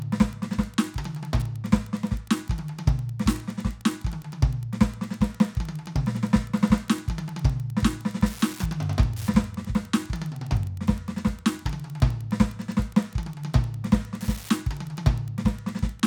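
Throughout the music runs a steady ticking at about ten per second, the signature of Wi-Fi interference. A nearby Wi-Fi radio's beacon, sent every 102.4 ms, is being rectified by the audio circuitry and leaks in as a faint click roughly 30 dB below the music. On a spectrogram it shows as evenly spaced thin vertical lines across the frequency range. On the waveform it appears as small, regularly spaced spikes riding on the signal.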